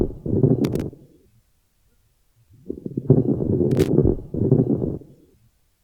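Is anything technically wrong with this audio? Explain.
Yes. There is loose connector crackle at 0.64 to 0.82 s and again at 3.71 to 3.89 s, each lasting about 0.17 s. A worn or dirty contact keeps making and breaking. That chops the signal into a short, irregular burst of scratchy crackle.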